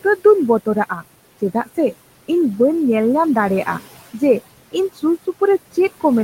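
Noise suppressor artifacts run throughout the speech: steady background noise is cut by about 17 dB between phrases, then swells back underneath them. The spectrogram shows the noise floor pumping with the speech. The room noise sits about 16 dB below the speech.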